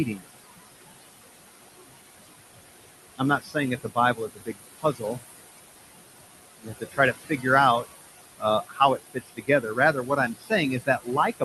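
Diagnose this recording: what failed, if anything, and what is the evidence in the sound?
Noise suppressor artifacts run through the whole clip, a fault in the call processing stage. The room noise, sitting about 10 dB below the speech, is pulled down by about 19 dB in the pauses and lets back up under each phrase, so the background pumps with the talking. The suppressor judges noise band by band in short frames.

Speech cut by the noise suppressor, also in call processing, happens at 3.18 to 5.17 s, 6.62 to 7.45 s, 8.38 to 8.8 s, and from 9.14 s to the end. In these spans quiet parts of the speech sink by up to about 21 dB, and 17 to 20 dB in the shorter middle spans. The affected time adds up to roughly 0.7 s, 0.4 s and 0.2 s in the first three spans. Low-level consonants and word endings fall under the suppressor's noise estimate, so it attenuates them along with the background and they come out swallowed.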